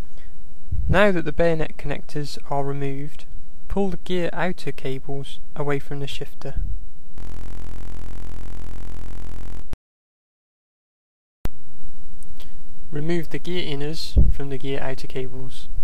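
From 7.18 to 9.62 s, a system hang loop repeats one 23.22 ms fragment, fitting a 1024-sample buffer, producing a steady 43.1 Hz buzz while the system stalls.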